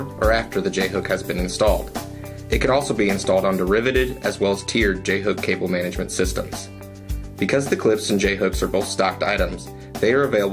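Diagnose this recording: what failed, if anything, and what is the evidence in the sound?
Nothing failed; no stage shows any audible fault.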